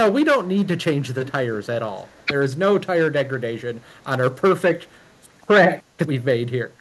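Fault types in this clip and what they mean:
Echo leak: A delayed copy of the speech, 338 ms late, returns at 1.04–1.32 s and fainter at 1.98–2.25 s, likely from uncancelled loudspeaker pickup.
Speech suppressed in double talk: From 2.25 to 2.32 s the speech dips by about 5 dB, likely because the echo canceller turned down overlapping talk.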